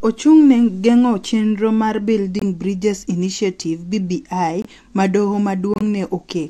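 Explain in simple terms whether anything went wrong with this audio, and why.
Three brief silences cut into the speech. Each is a corrupt frame muted: damaged data was rejected and replaced with silence. They occur after "chenro mar" at 2.39 s, at 4.62 s, and at 5.74 s. The last one is about twice as long.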